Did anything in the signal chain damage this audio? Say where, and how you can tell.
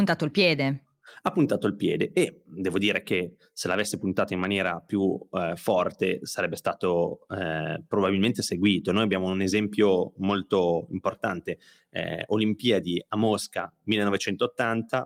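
No, nothing here was damaged.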